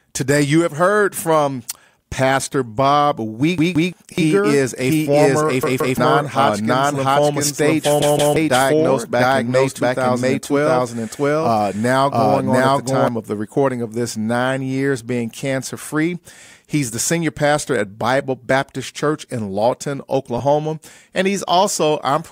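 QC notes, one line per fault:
3.58–3.93 s, 5.63–5.97 s and 8.02–8.36 s, repeated buffer: each time a chunk of about 171 ms plays three times over with hard joins, a stutter that fits an 8192-sample buffer being replayed while fresh audio failed to arrive, losing roughly 0.3 s of speech.
4.18–13.08 s, doubled audio track: a second full-band copy of the speech runs about 0.7 s behind at about the same level, with no reverberant decay or room colour, switching on and off abruptly. A second, slower capture path is the likely source.
20.38–20.40 s, lost LE Audio frames: about 20 ms of speech, which fits two dropped frames, becomes a brief noisy smear as the LC3 decoder fills the gap by reusing the previous spectrum with random signs, too short to fade toward silence.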